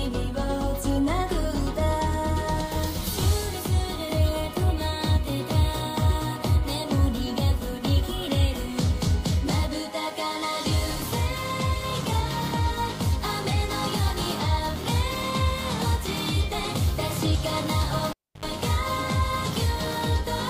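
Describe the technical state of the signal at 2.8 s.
At 2.8 s the signal is intact, with no audible dropout, distortion, glitch or other fault at that moment.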